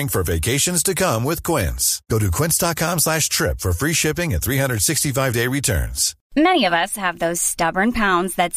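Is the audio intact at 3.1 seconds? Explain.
Yes, the speech plays through 3.1 s without any dropout, click, glitch or other audible fault.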